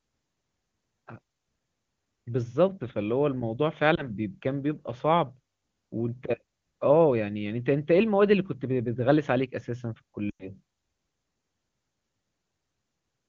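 At 3.95 s there is a brief warble lasting to about 4.10 s. This is a lost AMR speech frame. About 20 ms of coded speech failed its check, and the decoder bridged it by repeating the last good pitch and vocal tract shape at lower gain. Recovery takes a moment longer. At 10.29 s a longer loss of about 100 ms follows. The sound drops to near silence within two frames and returns roughly around 10.51 s. The clean wideband speech nearby points to a high-rate mode.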